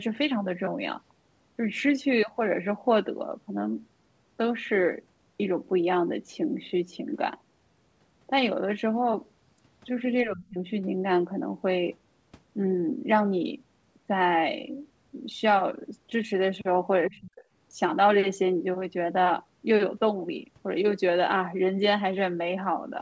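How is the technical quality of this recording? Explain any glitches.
The speech carries the band limit of a wideband call, with nothing above 8 kHz, which fits a G.722 codec. It also has two brief level collapses. From 10.24 to 10.59 s and from 17.07 to 17.5 s, the speech sinks by about 25 dB and then about 40 dB, each for a few tenths of a second. This is likely speech suppressed in double talk: the echo canceller mistook overlapping speech for echo and turned it down.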